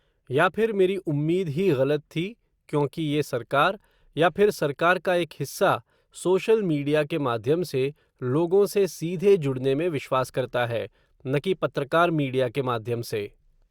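Nothing stood out as a technical problem at any point in the recording on listening.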